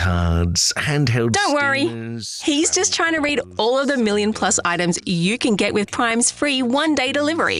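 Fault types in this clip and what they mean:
DAB burbling: weak reception lets a low rate of bit errors slip past error correction into the MP2 data, corrupting samples so single sub-bands get short blips of noise. Here it hits 11 frames from 3.18 to 3.44 s and 3 frames briefly at 6.11–6.14 s.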